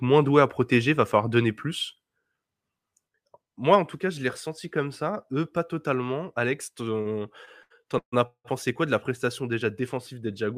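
A speech clip with two network timing faults. At 7.01 to 7.07 s there is a short stall from a late packet: a packet missed its playout slot, the jitter buffer drained, and the receiver held the last sound for about 38 ms until it arrived, then resumed where it had stopped. Nothing is lost, but that instant of speech is drawn out, with a faint buzz or dip and the timing pushed about 38 ms later. From 7.45 to 8.47 s, just before "quoi de la", packets kept arriving late, causing repeated stalls (stutter). The buffer emptied four times, and the receiver extended the last sound each time, about 413 ms in total, or 41 percent of that second. The longest hold runs 181 ms and fades. No speech is dropped, but the passage drags and stutters in uneven jerks.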